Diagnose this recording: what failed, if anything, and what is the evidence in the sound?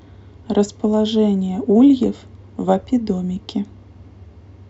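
Nothing failed here; the speech shows no audible faults.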